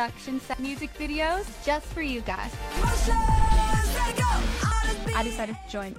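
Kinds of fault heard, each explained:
Damaged data in a compressed stream: corrupted bytes in the encoded stream make the decoder misread frames and lose sync until it locates the next valid frame header. Here this is heard as three brief blips at 0.54, 2.77 and 4.72 s.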